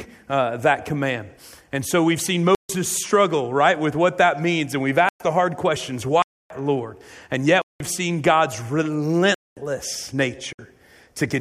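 Blocks of digital silence drop out the audio at 2.55–2.69 s, 5.09–5.20 s, 6.22–6.50 s, 7.62–7.80 s, 9.34–9.57 s and 10.53–10.59 s, holes from 60 ms up to 279 ms long. Each time the signal snaps straight to silence and back with no fade. The 186 ms gap fits an 8192-sample buffer left unfilled, pointing to the program missing its output deadline rather than the recording itself going quiet.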